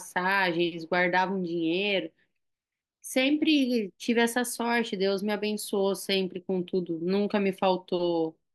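No technical faults can be heard anywhere in the recording.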